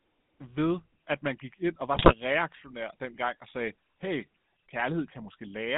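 Speech passed through the GSM full-rate codec, which fits a 13 kbps mobile link: it band-limits the audio to roughly 150 Hz to 3.7 kHz and leaves the voice plainly buzzy and gravelly throughout. From 1.94 to 2.14 s, GSM bit errors corrupt the decoder's filter, pitch and gain values, breaking the speech into squawks and gargling pops over what sounds like about eight frames.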